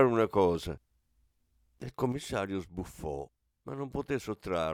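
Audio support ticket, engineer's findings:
Sudden gain jump at 2.12 s. Speech and background noise drop together by about 5 dB and stay down to the end. No ramp; the level steps between adjacent samples. Likely a digital gain change or bit shift applied without smoothing.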